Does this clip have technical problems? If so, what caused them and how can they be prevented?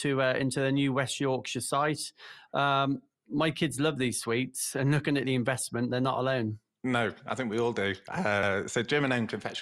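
Yes. Repeated frames at 8.43 to 8.52 s, just after "think we all do": a 92.9 ms block, consistent with a single compressed frame, plays twice. This causes a stutter and adds 92.9 ms. Prevent it by checking frame sequence numbers when writing or streaming, and dropping duplicates.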